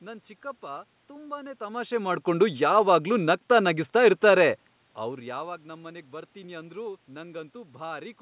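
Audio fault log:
No technical faults heard.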